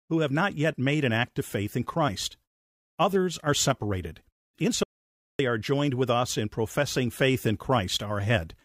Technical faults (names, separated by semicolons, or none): audio dropout to silence